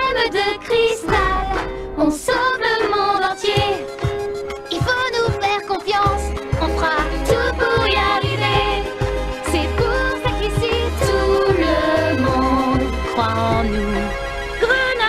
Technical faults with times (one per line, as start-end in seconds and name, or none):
none